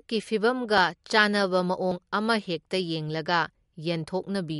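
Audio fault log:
throughout – MP3 compression: the speech sounds plainly watery and swirly, with nothing above 11.2 kHz, likely from MP3 encoding at a rate that fits about 54 kbps. A spectrogram shows a hard ceiling at 11.2 kHz and speckled gaps where weak frequency lines flicker on and off.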